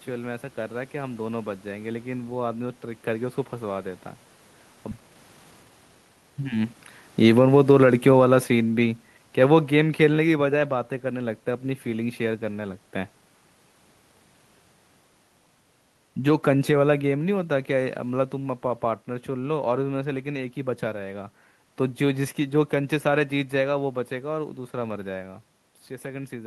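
A skip ahead at 4.91 to 4.93 s cuts roughly a second out of this speech recording: audio that was already waiting got discarded, likely when the jitter buffer overflowed, so playback jumps forward with no gap filling the join. Jitter buffer speed-up follows from 4.97 to 6.74 s, where the receiver, still holding more audio than its target, trimmed short pitch-period slices repeatedly, running the speech at about 132 percent with unchanged pitch and shedding around half a second of delay. Automatic gain falling from 7.09 to 10.74 s lowers the level by about 8 dB as the gain control reacts to input it judged too loud or too noisy for its starting gain, so the speech and the room noise behind it sink together.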